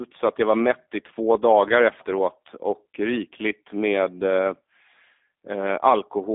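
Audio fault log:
throughout G.729 codec: speech sounds rough and synthetic, rebuilt from sparse pulses, consistent with 8 kbit/s. On a spectrogram, energy sits only between 250 Hz and 3.6 kHz.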